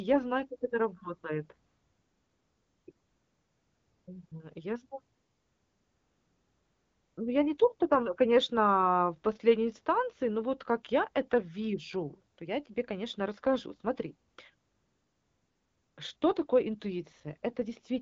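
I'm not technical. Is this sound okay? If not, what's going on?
No. AMR comfort noise fills the gaps at 1.67–2.87 s (right after "знаю как это работает"), 2.91–4.07, 4.27–4.31, 5.13–7.17, 12.33–12.37 (between "как я это вижу" and "я тебе конечно расскажу"), 14.29–14.37, 14.55–15.97 and 16.17–16.21 s. In each pause the phone decided nobody was talking and stopped sending the real sound. The receiving end then played a smooth, steady imitation hiss in its place, so the real background switches on and off. The HD Voice phone sound around it is clear.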